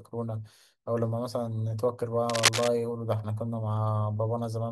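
From 2.29 to 2.68 s, cable scratch noise cuts across the speech: a rough, scratching rustle, about 5 dB louder than the voice, likely from a worn cable or connector being moved. A spectrogram shows dense, irregular broadband bursts; the waveform shows jagged spikes.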